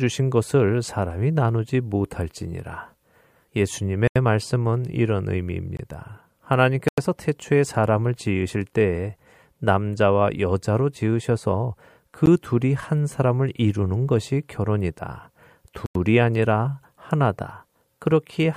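Speech broken by abrupt dropouts, blocks of digital silence, at 4.08, 5.77, 6.88, 12.26 and 15.86 s, lasting 13 to 93 ms, likely where the output buffer went unfilled.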